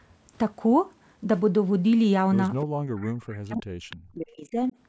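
At 2.61–2.65 s, 2.97–3.05 s and 3.90–3.96 s, brief scraps of echo leak appear: a copy of the speech trailing by 303 ms, roughly 20 to 25 dB below it. The likely cause is a far-end loudspeaker echo that the echo canceller left partly unremoved.

From 2.71 to 4.74 s, speech is suppressed in double talk, dipping in pieces by as much as around 40 dB over about two seconds. The likely cause is the echo canceller mistaking the talker for echo while both sides spoke.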